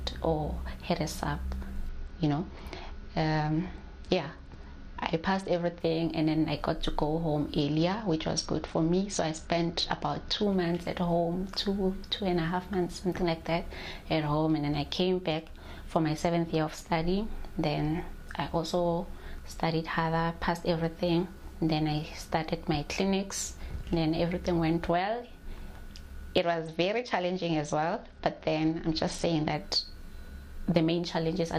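Bluetooth SBC bit pool drops hit at 1.89 to 5.80 s, 7.61 to 10.43 s and 26.43 to 29.54 s: the congested link starves the top sub-bands, so the treble goes dull and gritty, consistent with a fall to about 78 kbps.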